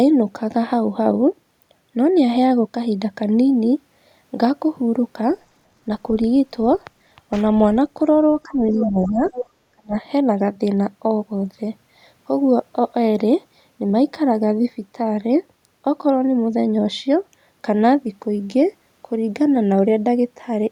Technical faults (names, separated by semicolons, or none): speech suppressed in double talk; other side's voice leaking through